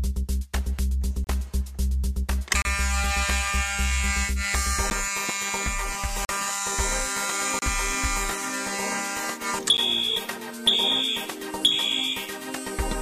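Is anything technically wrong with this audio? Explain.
Yes. Blocks of digital silence cut the sound at 1.24–1.27 s (27 ms), 2.62–2.65 s (30 ms), 4.90 s (10 ms), 6.25–6.29 s (40 ms), 7.59–7.62 s (30 ms) and 9.77 s (10 ms). Each time, zeros take the place of the audio, either because the output buffer wasn't filled in time or because a calculation produced invalid values. Unlike a fade or a level drop, the sound stops and resumes abruptly with nothing in between. The two 10 ms gaps are too short to register as silence and come across as ticks or dips, while the longer ones are heard as short holes.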